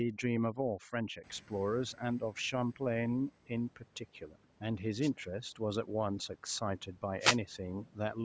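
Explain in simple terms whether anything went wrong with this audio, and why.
Two things went wrong in this speech recording.

The first is overdone noise removal, and it runs through the whole clip. A cleanup tool was set too strong. It kept switching off narrow slices of sound that looked like background noise. Quiet parts of the voice were caught and removed too. The background drops and breaks up into twinkling specks.

The second is a wireless microphone noise hit, heard twice: from 5.01 to 5.10 s, and from 7.19 to 7.38 s. The radio link between the microphone and its receiver briefly weakened. Reflected signals cancelled each other out. Hiss from the receiver rose. Each hit sounds like a short swish or burst of static.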